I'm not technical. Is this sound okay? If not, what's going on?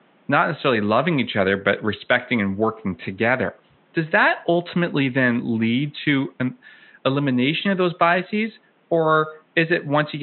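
Yes, no faults here.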